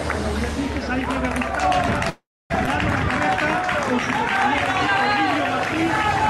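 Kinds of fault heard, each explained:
Call audio freeze: From 2.09 to 2.52 s the sound stalls for about 0.41 s, likely because packets were held up and the jitter buffer ran dry. The last sound is stretched out and fades, with roughly the final 0.26 s silent, then playback resumes where it stopped.
Skip ahead: Just after the freeze, at about 2.66 to 2.69 s, playback jumps forward, dropping roughly a fifth of a second of audio. The two sides are butted together with only a tiny 7 ms fill, which helps recover the delay the stall added.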